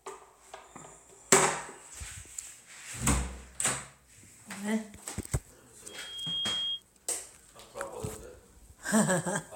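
From 5.88 s to 6.82 s a loudspeaker feedback squeal rises out of the sound: a single pure tone near 3.3 kHz swells over about half a second until it is roughly as loud as everything else. A microphone is hearing the loudspeaker it feeds, and at that frequency the loop gain passes one, so the tone feeds itself. Unlike a steady interfering whistle, it starts from nothing and grows on its own before stopping.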